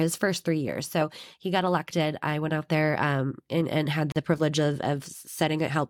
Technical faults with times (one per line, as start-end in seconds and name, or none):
4.12-4.16 gap at a join of encoded pieces